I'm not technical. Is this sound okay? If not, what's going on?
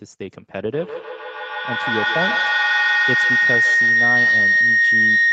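No. From 0.74 s to the end there is feedback howl: a microphone picks up a nearby loudspeaker on the same call, and the sound loops back and grows louder each pass. It becomes a shrill tone near 2 kHz, with the sound coming back about every 150 ms, louder than the speech.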